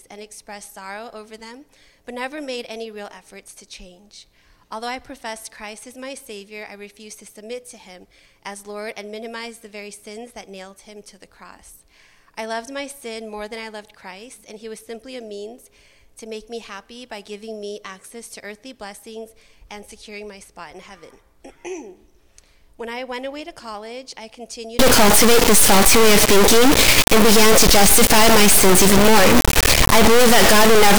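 From 24.79 s to the end, the audio turns into a harsh, very loud buzzing square wave. This is integer read as float, which fits 32-bit integer samples being decoded as 32-bit float values.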